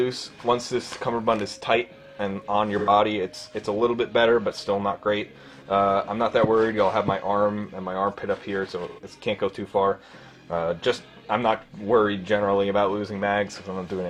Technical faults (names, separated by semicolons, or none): AAC frame loss with concealment